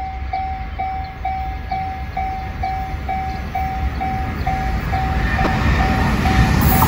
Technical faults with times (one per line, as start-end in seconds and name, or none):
5.44-5.47 damaged data in a compressed stream